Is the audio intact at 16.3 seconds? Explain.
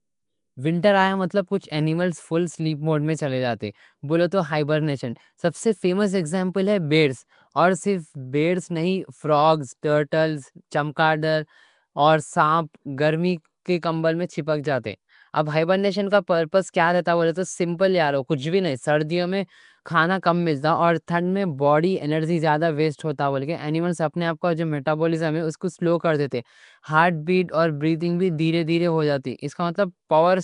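No. At 16.3 seconds, as across the whole recording, the speech has likely passed through Nellymoser compression, the old Flash microphone codec, at a rate that fits about 44 kbps. It codes short blocks with a fixed, thin bit budget, so weaker bands get no bits and are filled with synthetic noise. The speech carries a rough, hissy halo and a smeared, underwater quality, and nothing survives above about 10.6 kHz.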